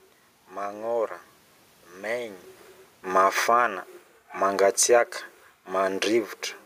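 From 3.01 to 3.69 s the speech and the room noise behind it sink together by about 7 dB. That shared drop is automatic gain falling: the gain control judged the input too loud and pulled its gain down. This comes shortly after the talker moved at around 2.5 s, which is not itself a fault.

From 3.6 to 4.0 s both swell back up by about 4 dB. This is automatic gain rising, as the control found the level too quiet and raised its gain.

From 4.55 to 5.0 s a second, smaller automatic gain falling lowers voice and background together by about 3 dB.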